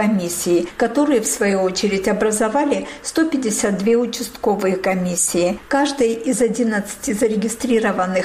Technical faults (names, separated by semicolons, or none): none